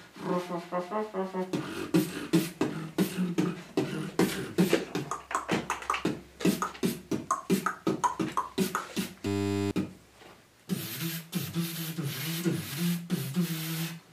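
From 9.27 to 9.71 s a steady 100 Hz buzz replaces the audio: a system hang loop, with one 10 ms buffer replaying while the system froze.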